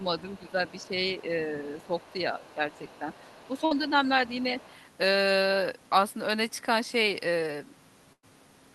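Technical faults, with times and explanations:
0.19–0.88 s, 1.81–3.89 s and 4.26–4.76 s, other side's voice leaking through: a faint second voice sits underneath the main talker, about 30 dB down. The likely cause is the far end's audio coming out of the talker's loudspeaker, reaching the microphone, and not being fully removed by the echo canceller, so leftover fragments of it are sent back along with the talker's own speech.
0.39–2.21 s and 2.55–3.94 s, speech suppressed in double talk: the main voice dips by a few dB in patches, adding up to roughly seven-tenths of a second within each span. Both sides were likely talking at once, and the echo canceller, unable to tell its own talker from the loudspeaker echo, turned the whole microphone signal down instead of only the echo.
3.65–3.73 s and 8.13–8.25 s, burst of packet loss: at 3.65 s the sound briefly turns into a held, fading continuation for about 53 ms before the speech picks up again further along, with about 60 ms missing. 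At 8.13 s a similar fill lasts about 100 ms, about 70 ms of it silence, with about 100 ms of speech gone. Consecutive packets were lost or arrived too late, so the receiver extended the last sound and faded it out until new audio arrived.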